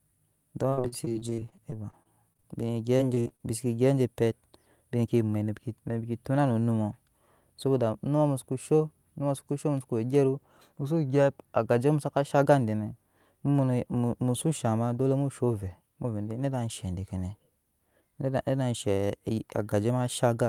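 Speech with repeated packet loss (robotic sound) from 0.69 to 2.45 s and 2.97 to 3.41 s. Lost packets are patched by repeating sound, leaving choppy gaps up to 54 ms. A jitter buffer speed-up at 5.04 to 5.60 s trims pitch periods, about 70 ms in total. Speech runs 11% faster, at the same pitch.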